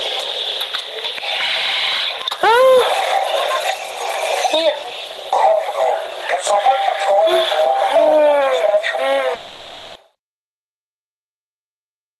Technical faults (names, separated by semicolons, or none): long network dropout